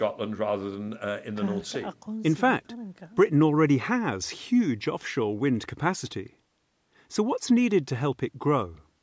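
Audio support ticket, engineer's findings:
No faults found in the speech; call microphone processing working as expected, high-pass filter removing the lowest bass and no content above 8 kHz.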